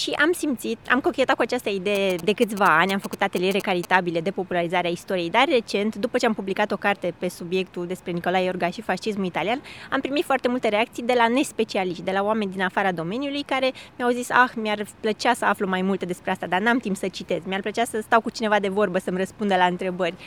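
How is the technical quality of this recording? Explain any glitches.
One fault stands out: GSM signalling bursts from 1.95 to 3.85 s. A nearby 2G phone sent short groups of radio bursts to the network, and the audio circuit rectified them into a galloping dit-dit-dit of brief 217 Hz buzzes, roughly 10 dB below the main sound.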